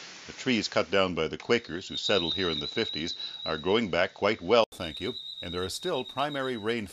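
For the first 4.72 s the sound is dull and capped around 7.2 kHz, with a noise floor roughly 40 dB down, then an 80 ms gap and it opens up, roughly 5 dB different in level. That's likely an input switched to a poorer device.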